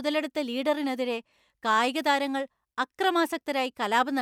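No technical faults are audible.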